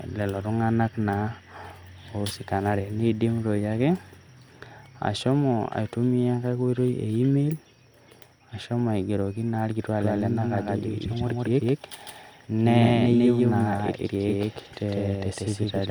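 From 10.01 s to the end, a doubled audio track appears: an equally loud, full-band copy trails by roughly 150 ms, likely from a slower second capture path. It sounds like a hard slapback echo without room colour. Waveform and spectrogram show every feature repeated a fixed gap later, starting abruptly.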